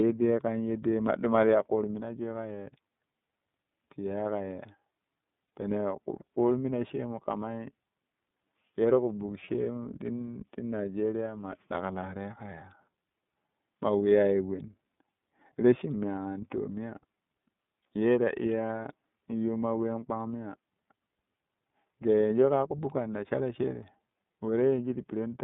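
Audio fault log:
Throughout: iLBC codec. Speech is confined to roughly 150 Hz to 3.6 kHz and sounds rough and synthetic, which points to iLBC coding with 30 ms frames rather than plain band-limiting.
5.45–5.48 and 9.44–9.50: lost iLBC frames. Each 30 ms gap becomes a brief buzzy, held vowel from repeated pitch cycles, then the voice is right again almost at once, unlike a hard dropout's silence.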